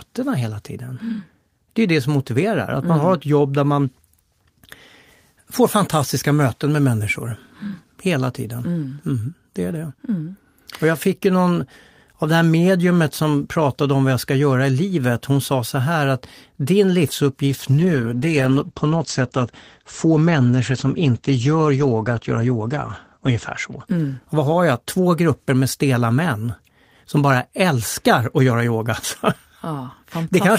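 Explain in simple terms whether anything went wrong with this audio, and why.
From 17.48 to 25.31 s, between "så här att din" and "med stela män som", there is a call bitrate drop. The call's connection squeezed the sound into far less data, so the speech turns muffled and rough, with its crisp top end gone. Unlike packet loss, there are no gaps or stutters, just a dulling until quality returns.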